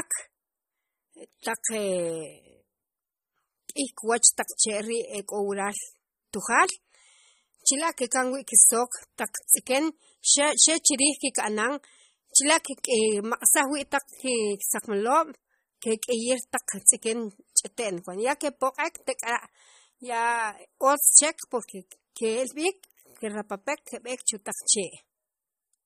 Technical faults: MP3 compression

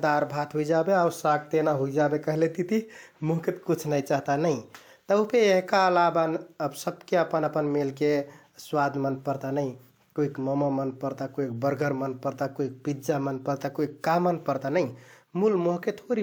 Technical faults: none

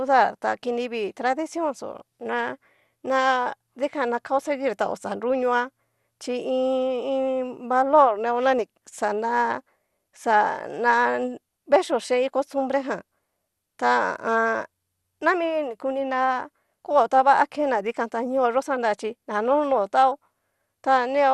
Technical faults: MP2 compression

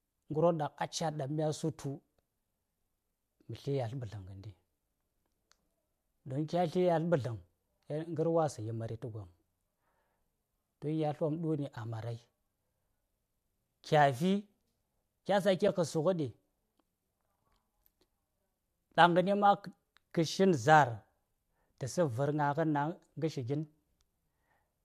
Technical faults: AAC frame loss with muting

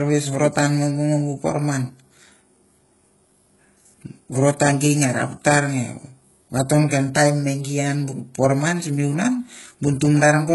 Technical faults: HE-AAC compression

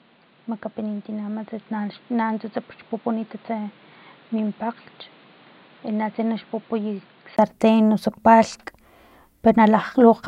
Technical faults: input switched to a poorer device

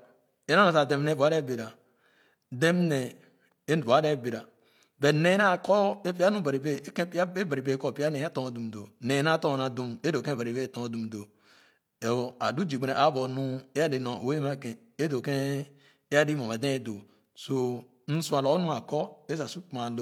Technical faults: none

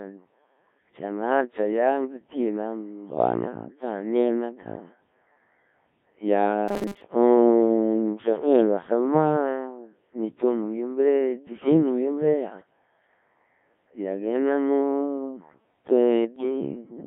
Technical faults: Codec 2 vocoder; robotic sound from repeated short buffers; bit errors on digital voice radio

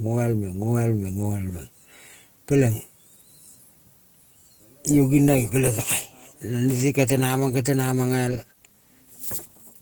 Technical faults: Opus compression

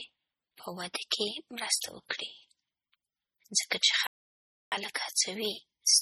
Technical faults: MP3 compression; playback stall

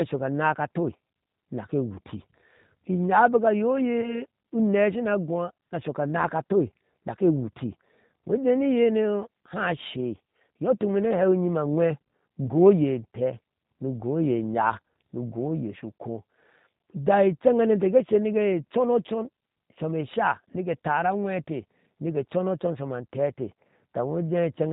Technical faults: G.729 codec; VoIP packet loss concealed by the speech codec

